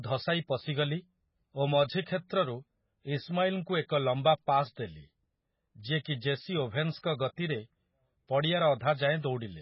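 From start to finish the speech carries heavy MP3 compression damage. Nothing is present above 5.5 kHz, so sibilants lose their edge and the sound is dull. Weak spectral components drop in and out between frames, giving a watery, swirling texture with chirpy artefacts on s sounds and smeared onsets. The damage is likely from MP3 encoding with too few bits, which fits a very low bitrate around 16 kbps.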